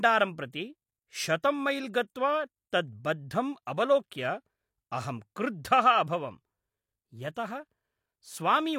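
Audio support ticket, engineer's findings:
Pre-echo on speech attacks. Brief hiss before the onset at 1.42 s, ahead of "मैल् गत्वा" (13 ms), and at 7.34 to 7.36 s (20 ms). Probable component: transform codec. Noise sized for the loud attack spills into the quiet block start.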